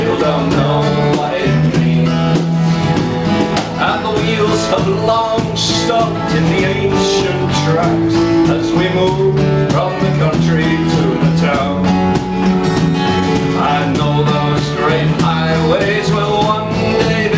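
Throughout the clip the gain swings by around 10 dB, with loud and soft parts pulled closer in level, leaving the sound squashed. This is gain pumping, likely from gain set far too high with a fast limiter clamping down, heard over a call path with nothing above 8 kHz.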